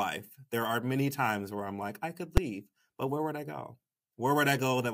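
At 2.37 s, right after "I'm like I could", the speech is hit by invalid numbers at full scale. A calculation produced infinite or invalid values that were clamped to maximum amplitude for one 5.8 ms block, which fits a 256-sample buffer. The block is so short that it is heard as a single loud bang.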